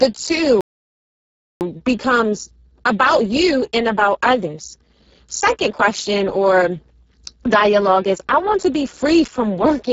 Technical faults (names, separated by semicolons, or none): Speex codec; playback stall; time-compressed catch-up